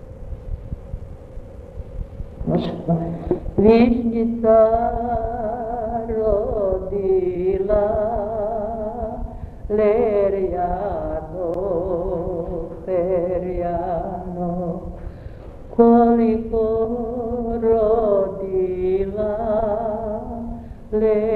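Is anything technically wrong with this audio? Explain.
Yes. There is damaged data in a compressed stream at 5.20, 7.34, 11.54, 16.84 and 19.58 s. Corrupted bytes make the decoder misread frames and lose sync, producing brief chirps or blips.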